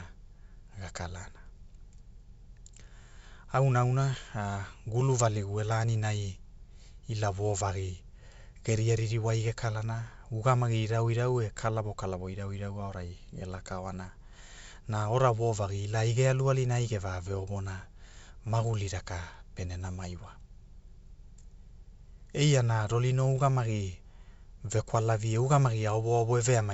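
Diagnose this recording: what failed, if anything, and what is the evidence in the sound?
Nothing has failed: the speech passes through G.722 wideband telephone coding at 64 kbit/s, limited to about 7 kHz with at most a faint upper-band hiss, and no stage from capture to playback leaves any audible damage.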